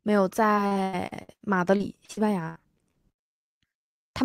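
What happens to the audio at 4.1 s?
Nothing goes wrong at 4.1 s; the speech carries on intact through that moment with no dropout, click or distortion.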